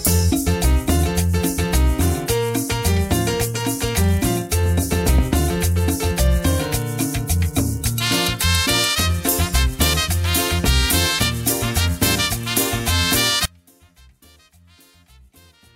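The signal path likely lost its wanted input at 13.45 s while staying live, an audio dropout to a faint residue. The sound cuts off abruptly rather than fading, and from there to the end only a faint leak remains, roughly 30 dB below its normal level.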